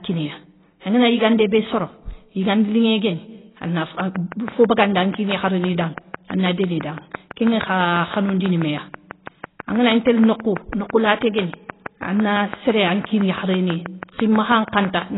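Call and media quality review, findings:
Likely AAC compression (AAC-LC) at a very low bitrate, consistent with roughly 16 kbps; the encoder drops everything above 3.9 kHz and coarsely quantises what remains. Throughout the speech, this produces heavy codec damage: dull, band-limited, smeared sound with a warbling texture.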